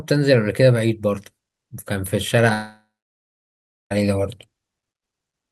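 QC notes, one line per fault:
2.53–3.92 s, long network dropout: audio likely stopped arriving for nearly 1.4 s, so the receiver carried the last sound on as a fading buzz, which gives way to about 1.05 s of silence. Speech then resumes with about 1.38 s missing.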